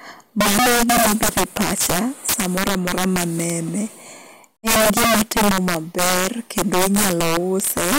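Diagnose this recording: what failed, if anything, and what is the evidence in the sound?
Integer overflow in the sample-format conversion: speech pushed about 18 dB too hot wraps instead of clamping, so roughly 7% of samples snap to opposite sign as harsh cracks throughout.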